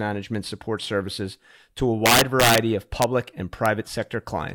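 A gain or summing stage in this speech exceeds its largest integer value and wraps to the opposite sign instead of being limited, which is integer overflow. From 2.06 to 2.58 s the loud passage is driven about 5 dB past that limit, so its peaks flip across the full range and produce a run of violent cracks, harsher than clipping. Sharp cracks follow at 3.02 s and 3.66 s, where peaks only just reach the limit.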